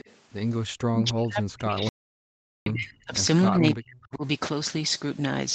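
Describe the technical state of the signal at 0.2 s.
Just before this moment, from 0.0 to 0.16 s, an echo leak is heard. The far end's echo canceller likely failed to fully remove its loudspeaker output from its microphone, so a faint copy of the speech returns about 0.29 s late, well below the direct sound.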